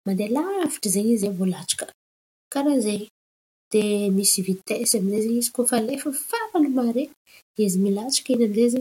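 A grainy, gritty distortion runs through the whole speech clip and rises and falls with the speaking itself, roughest on soft syllables and trailing ends of phrases, where the quietest parts sputter or drop out. The error sits roughly 35 dB below the speech. This is likely low bit depth without dither: samples rounded to very few levels, pointing to around 8 bits, so the error tracks the signal instead of forming a steady hiss.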